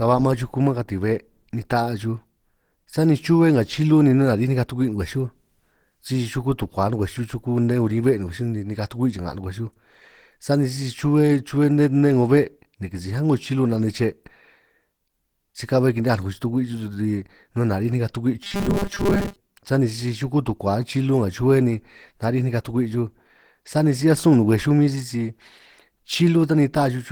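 Throughout, the speech sounds muffled and hoarse, likely from Opus compression at a low bitrate in hybrid mode; the spectrogram shows grainy, smeared upper bands.

From 18.44 to 19.36 s, a rigid metallic buzz at 200 Hz appears. This is likely robotic sound from repeated short buffers, with 5 ms chunks replayed in place of most of the audio. The waveform shows identical repeating cycles, and the spectrogram shows evenly spaced harmonic stripes.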